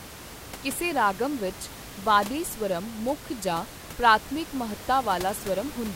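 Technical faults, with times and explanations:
No technical faults can be heard anywhere in the clip. Background noise from the room sits under the speech, about 15 dB below it, as part of the recording itself.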